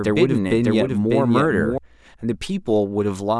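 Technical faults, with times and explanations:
0.0–1.78 s, doubled audio track: the speech was likely captured again through a slower path, so a dry full-band copy trails the original by around 0.7 s at about 5 dB lower. It is under way as the clip opens and stops abruptly at 1.78 s.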